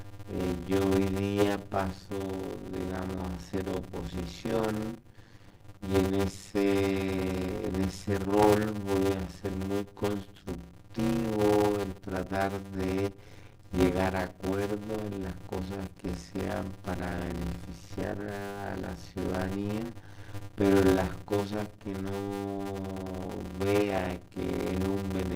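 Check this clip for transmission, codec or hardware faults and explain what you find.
One fault runs through the whole clip: a steady 100 Hz buzz over audio that plays at about 0.53 times normal speed with its timbre unchanged. This is a block size mismatch (padded), which fits 256-sample blocks being read as roughly 480-sample blocks and zero-filled, leaving a gap in every block.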